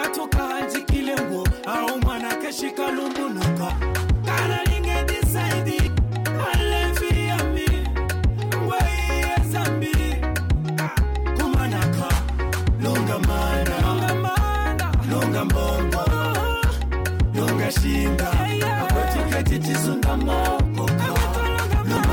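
Damaged data in a compressed stream at 3.70 s, 5.87 s and 21.97 to 22.00 s: corrupted frames throw the decoder out of sync, giving brief chirps or blips.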